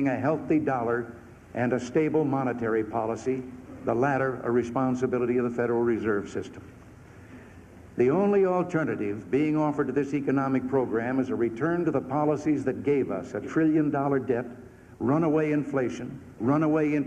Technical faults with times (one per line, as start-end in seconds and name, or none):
none